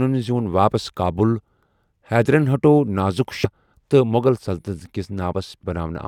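At 3.44 to 3.46 s the speech is broken by a brief glitch, and a second, shorter blip follows at 5.62 s. Both come from damaged data in a compressed stream: part of the encoded file was lost or corrupted, so the decoder could not read those frames correctly, lost sync and had to find the next valid frame header. Each event lasts only around 15 to 20 ms.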